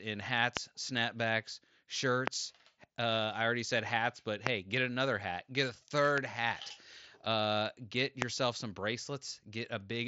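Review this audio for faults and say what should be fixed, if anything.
Five sharp loud pops, each a single click about 20 to 25 dB above the speech, which carries on underneath. They land at 0.57 s, 2.28 s, 4.47 s (between "already said hats but" and "get another hat get"), 6.18 s (after "another hat get a") and 8.22 s (after "uh get"). Each is a brief voltage pulse added to the signal, likely from a loose connector, static discharge or a driver glitch in the headset chain. The speech, band-limited near 7.7 kHz by the Bluetooth mSBC headset link, plays through beneath them. To prevent this, secure the cables and connectors and keep the headset driver stable.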